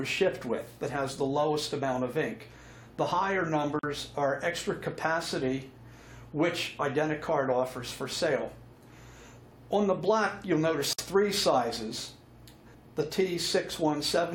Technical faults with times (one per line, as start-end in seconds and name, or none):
3.79-3.83 gap at a join of encoded pieces
10.93-10.98 gap at a join of encoded pieces